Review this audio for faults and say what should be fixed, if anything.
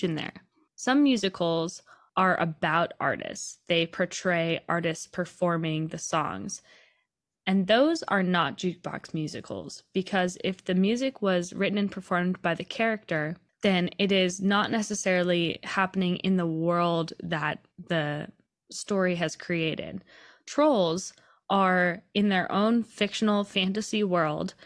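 Nothing in the signal needs fixing, since no technical fault can be heard anywhere in the recording.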